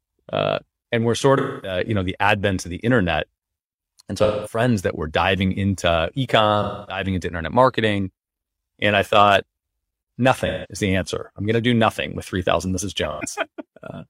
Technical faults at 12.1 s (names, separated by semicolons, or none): none